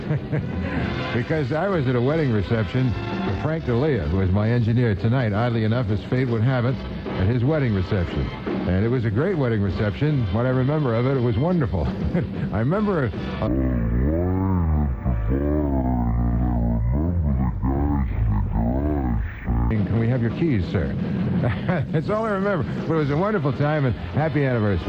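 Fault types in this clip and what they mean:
stereo read as mono: interleaved left and right samples were read as one channel, so from 13.47 to 19.71 s the sound runs at half speed, an octave low.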